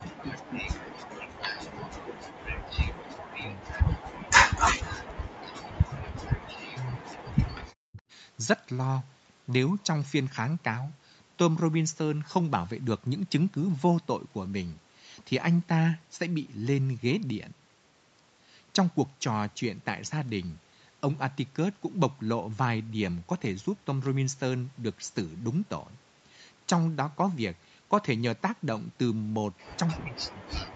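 From 0.0 to 0.75 s the speech dips by as much as about 40 dB, most likely speech suppressed in double talk: with both sides talking, the echo canceller turned down this talker along with the echo.

Between 0.15 and 0.22 s a faint delayed copy of the speech, about 25 dB below it and 239 ms late, comes through. This is likely an echo leak from a loudspeaker whose echo canceller missed part of the pickup.

The same drops of up to about 40 dB recur from 1.16 to 4.99 s, from 5.81 to 6.42 s, and from 6.58 to 7.99 s. A final one runs from 29.88 s to the end. All are again likely double-talk suppression.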